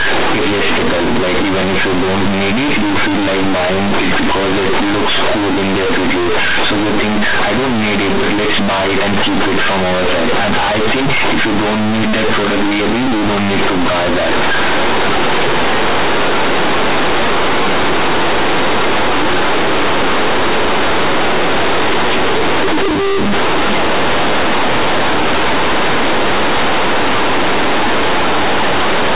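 From the first moment to the end, the speech is hit by companded audio read as linear. The bytes were mu-law coded but played back as plain linear 8-bit samples with no expansion, so every sign change throws the output across roughly half its range. Quiet passages come out as loud as peaks, giving a harsh, buzzy roar and heavy noise in the pauses. Ordinary clipping only flattens the loudest peaks; here the silences are just as noisy. The audio stays within the telephone band, nothing above 4 kHz, as expected from 8 kHz mu-law coding.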